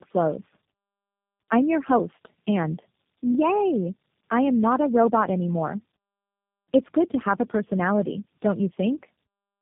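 Throughout, the speech sounds rough, muffled and warbly, with nothing above 3.6 kHz. This is tandem speech coding. The sound points to three low-rate speech codecs in a row, consistent with AMR-NB twice and then G.729A, each re-coding the previous one's damage.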